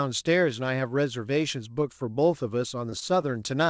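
At 2.90 to 2.94 s there's a short concealed packet loss: about 20 ms of audio never made it to the decoder, so the receiver papered over it by extending the preceding sound for roughly 19 ms before blending back. You hear it as a quick smear or tiny wobble.

Right after, at 3.00 to 3.03 s, comes a short stall from a late packet. The jitter buffer ran dry when a packet arrived about 16 ms late, so the last sound got stretched by 16 ms and then picked up where it left off. Nothing's missing, just a sound held slightly too long with a faint buzzy dip. The call path itself has nothing above 8 kHz, which fits a wideband codec like G.722.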